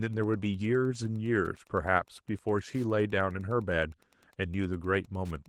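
Wi-Fi interference runs through the whole clip. A nearby Wi-Fi radio's beacon, sent every 102.4 ms, is being rectified by the audio circuit, giving a faint, steady ticking about ten times a second, well below the speech and still audible beneath the lightly coded Opus audio.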